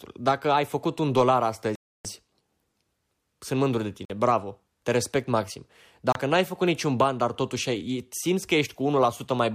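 Speech clip with a likely Bluetooth stall, where delayed packets emptied the receiver's buffer: the sound drops to silence at 1.75–2.05 s, 4.05–4.10 s and 6.12–6.15 s, then resumes.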